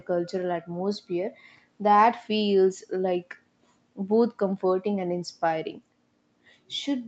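No technical faults are audible.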